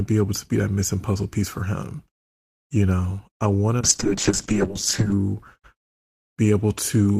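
Call bitrate drop from 3.84 to 5.23 s, after "know I want": the bit-starved encoder codes coarsely, turning the speech rough and muffled, which fits roughly 7 kbps.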